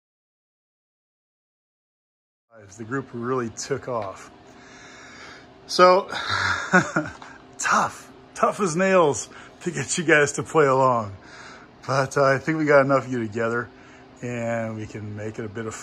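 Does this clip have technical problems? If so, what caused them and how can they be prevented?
No, there's nothing wrong here, just a gentle, editor-style fade-in that begins around two and a half seconds and reaches full level by 3.01 s, with no click or hard edge.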